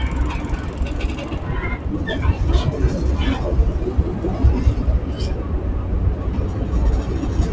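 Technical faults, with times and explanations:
Throughout: noise suppressor applied to music or sounds. Held portions and decaying tails sink while onsets come through intact, so the level pumps and flutters, swinging by roughly 5 dB, and the ambience thins out between events. A suppressor designed for speech is treating the steady, sustained parts of this non-speech audio as background noise and pulling them down. The top end stopping at 8 kHz comes from the call codec, which fits G.722.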